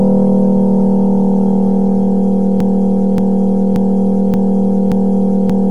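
At 2.6 s a broken-record loop begins: one 0.58 s fragment repeats exactly, back to back, five times until the end, likely because playback stalled and kept resending its last buffer. The waveform and spectrogram show identical blocks tiling evenly, each hard joint a sudden seam.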